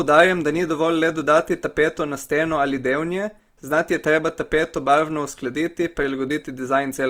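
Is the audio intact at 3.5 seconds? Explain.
No. At 3.5 seconds, as across the whole clip, the speech carries Opus compression damage, likely from a low bitrate around 24 kbps. Starved bands are refilled with folded copies or noise. So the speech sounds grainy, rough and noisy.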